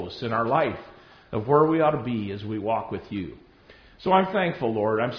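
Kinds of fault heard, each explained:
No technical fault is audible anywhere in the recording.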